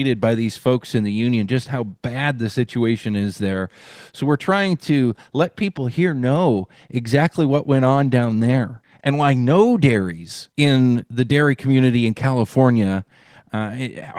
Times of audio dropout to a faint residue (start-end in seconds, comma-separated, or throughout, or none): none